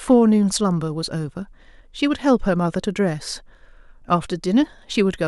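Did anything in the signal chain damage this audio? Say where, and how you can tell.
Yes: hard clipping from 0.11 to 0.14 s, right at the start of the clip. Peaks there exceed what the converter or sample format can hold by about 1 dB and are sliced flat. The squared tops add high harmonics, heard as a brief crackle.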